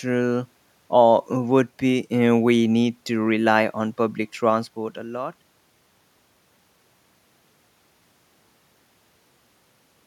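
Zipper noise runs from 4.43 to 6.00 s in this speech clip. The level drops by roughly 25 dB in 2 dB steps at about seven per second, with no smoothing, so each jump clicks.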